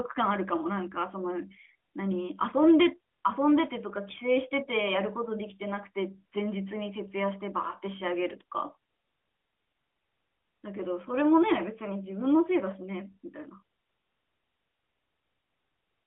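Nothing goes wrong anywhere in this speech clip; it simply comes through the narrow band of an ordinary mobile call, with its top end stopping well short of 4 kHz.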